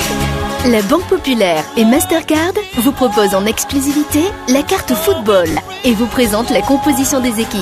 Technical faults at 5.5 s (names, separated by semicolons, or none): lost LE Audio frames